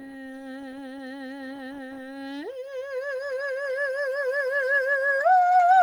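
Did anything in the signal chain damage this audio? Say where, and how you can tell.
No, nothing in the chain audibly damaged this music, and there is no stage to point to.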